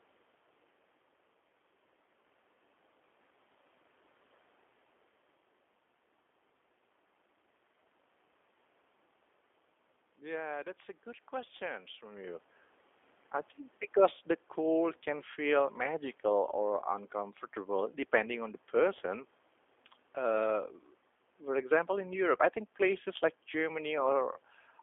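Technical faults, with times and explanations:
Throughout, G.729 codec: the speech is held to a 300 Hz to 3.5 kHz band and rebuilt from a vocal-tract model and a few pulses per frame. This gives a plainly rough, synthetic edge that fits an 8 kbit/s G.729A coder.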